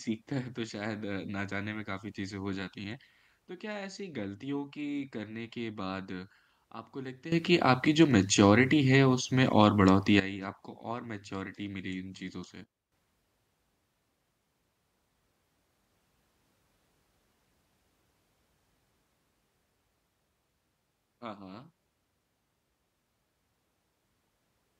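At 7.32 s the speech and its background noise leap up together by about 14 dB and stay loud until 10.2 s. From 12.64 s to 12.92 s both drop abruptly by about 12 dB. Each edge is instantaneous, with no fade. This sudden gain jump is likely a digital gain change applied from one sample to the next without a ramp, so the whole signal shifts level at once.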